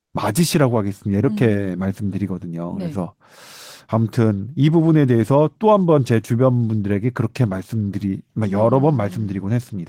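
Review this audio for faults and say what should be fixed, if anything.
The sender likely used discontinuous transmission, such as Opus DTX, and the receiver filled the gap with comfort noise in place of the background: from 0.05 to 0.13 s, about 80 ms of real background becomes steady, featureless noise about 20 dB quieter. Disabling DTX on the sending side, or tuning its detector so it does not trigger on brief pauses, would keep the real background intact.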